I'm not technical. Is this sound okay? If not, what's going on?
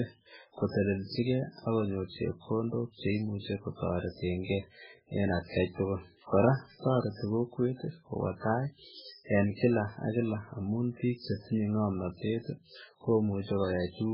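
No. MP3 compression damage runs through the whole clip. Nothing above 5.3 kHz survives, so the speech sounds dull and muffled, with a watery, swirling texture. It likely comes from squeezing the file too small, forcing the encoder to discard detail.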